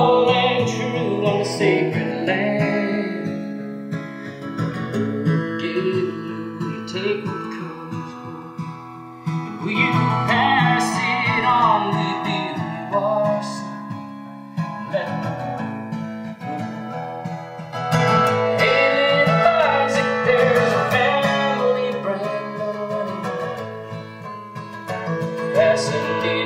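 Throughout the clip the two channels are drifting apart. Each side was clocked by a different device, with a mismatch of roughly 70 parts per million, so the delay between them creeps steadily and reaches around 2 ms by the end. Summed to mono, this gives slow flanging. On a spectrogram, comb notches appear as dark bands sweeping gradually through the spectrum.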